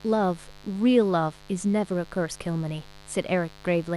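Something on the mains side, a dimmer, rectifier or unshielded run, is injecting sharp spikes twice per 50 Hz cycle. Across the whole speech clip this adds a steady, raspy mains buzz, with harmonics into the kilohertz range, roughly 25 dB below the speech.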